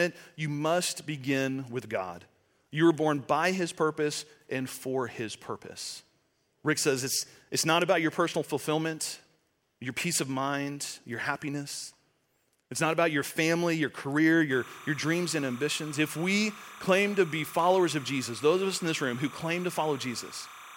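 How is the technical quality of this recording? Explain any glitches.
The recording has one clear fault in its final section: timecode bleed. From 14.51 s to the end, a chirping warble sits behind the speech. Linear timecode from a neighbouring track or cable is leaking into the audio path. That code is a square wave flipping between two pitches, here near 1 and 2 kHz. Its rhythm fits 30-frame timecode. It sits roughly 20 dB below the speech, so it stays audible as a steady, buzzy twitter behind it.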